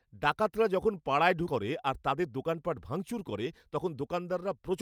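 At 1.47 to 1.64 s, just after "ডাকাতরা যখন পাড়ায়", the speech skips ahead: roughly 0.7 s of audio was dropped, likely by an overflowing jitter buffer, and the two sides are spliced almost directly. Unlike a dropout, there's no silent gap, just an abrupt jump forward.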